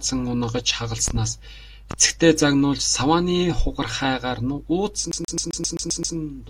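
At 1.08 to 1.20 s there's a loud pop, a quick double thump, and another single one at 1.91 to 1.95 s. Both sit roughly 10 dB over the speech, which carries on beneath them, and they're likely voltage spikes from a plug, switch or static discharge. From 5.12 to 6.16 s it turns into a CD stuck on one turn: a 131 ms slice of speech repeats eight times with a tiny mute at each jump, giving that fast, even skipping-disc stutter.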